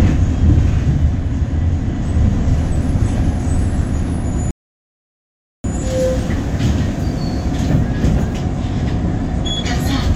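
At 4.51 s a rebuffering stall drops the sound into silence for 1.13 s, then resumes exactly where it stopped, so nothing is skipped, unlike a dropout.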